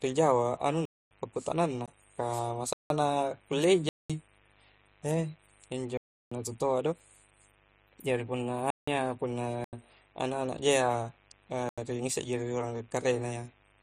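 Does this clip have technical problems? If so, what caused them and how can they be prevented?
Yes. A mains buzz comes from switching spikes from a dimmer, rectifier or poor shielding entering the signal path. They add a steady, raspy 50 Hz buzz with harmonics, about 35 dB below the speech, throughout. Prevent it with proper shielding, a clean power supply and keeping cables away from dimmers.

Blocks of digital silence occur when the software misses its output-buffer deadlines and writes zeros. This cuts the sound abruptly. The dropouts are at 0.85–1.11 s, 1.86 s, 2.73–2.90 s, 3.89–4.10 s, 5.97–6.32 s, 8.70–8.88 s, 9.64–9.73 s and 11.69–11.78 s. Several of the gap lengths fit buffers of 4096, 8192 and 16384 samples. Prevent them with larger buffers or a less loaded processing thread.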